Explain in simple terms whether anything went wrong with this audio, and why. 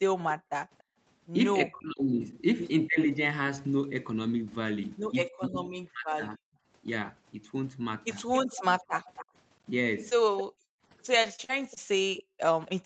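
Several things went wrong on this call, most of them typical of a conversation where one side uses a loudspeaker.

Echo leak: The far end's echo canceller, which should stop its microphone from sending back what its loudspeaker plays, likely let some through. You hear a faint delayed copy of the speech, about 0.29 s behind the original, from 0.29 to 0.83 s. The same thing happens again for longer, slightly louder, from 8.33 to 12.72 s, with a delay of about 0.28 s.

Background gated by the echo canceller: While the loudspeaker was playing, the echo canceller pulled the microphone right down to keep echo out. The room's background sound drops out almost completely, then comes back when the canceller releases. This happens briefly between 0.37 and 0.98 s, and for under a second in total between 10.44 and 12.40 s.

Speech suppressed in double talk: When both people talked at once, the echo canceller likely could not tell the local talker from the loudspeaker echo, so it turned both down. 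The speech sinks sharply or cuts out in pieces, about half a second in total between 1.67 and 2.99 s, and about a full second between 5.27 and 6.41 s.

Short concealed packet loss: Small pieces of the call arrived too late for the receiver to play. It covered each hole by briefly continuing the sound that came just before, then blended back into the real audio. Each patch is a tiny smear or wobble, at 10.09 to 10.13 s, 10.55 to 10.59 s, and 10.65 to 10.70 s. The last hole is about 40 ms long, twice the length of the others.

Repeated packet loss (robotic sound): Between 11.22 and 11.78 s, audio went missing four times in quick succession, with the longest hole about 42 ms. Each gap was patched by stretching the preceding sound, and the next gap came soon after. Together these make that stretch sound choppy, with small bits missing. Throughout the clip, nothing above 8 kHz comes through because of the call's limited bandwidth.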